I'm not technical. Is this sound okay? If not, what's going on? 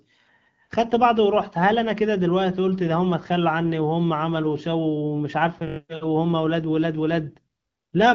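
No. At 5.68 to 5.78 seconds there's a system hang loop: the computer briefly froze while the sound hardware kept replaying one 21-millisecond scrap of speech five times, heard as a short buzz of about 47 repeats per second.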